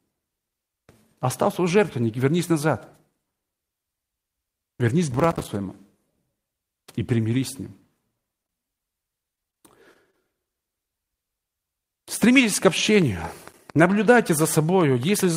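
Processor overload crackle runs from 5.11 to 5.48 s. The processor fell behind and missed about twenty of its short audio buffers over this stretch, each roughly 5 ms long. Every missed buffer came out as a sliver of silence with abrupt edges. Packed together, these tiny dropouts sound like a gritty, tearing crackle over the speech, and it stops once the load eases.

A short stall from a late packet follows at 8.47 to 8.51 s. A packet arrived late and the jitter buffer ran dry, so the receiver stretched the last sound for about 21 ms until the packet came in. It then resumed from the same point, so nothing is lost. The speech just hangs for an instant, and the delay is about 21 ms longer afterwards.

Repeated packet loss with a robotic sound covers 9.24 to 9.58 s. Four separate gaps, the longest 20 ms, remove about 60 ms of audio in total. Each hole is patched by continuing the previous sound, and the patches make up about 17% of the stretch. 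Because the gaps follow each other closely, the speech turns choppy and robotic, with pieces dropped out.

Short concealed packet loss occurs at 9.93 to 9.97 s and again at 10.11 to 10.15 s. Each time about 20 ms never reached the decoder in time. The hole was filled by extending the preceding sound and then blending back into the real signal. This gives a brief smear or wobble.

Processor overload crackle returns at 13.51 to 13.75 s. This time about ten buffers are missed, so the crackly tearing burst is shorter.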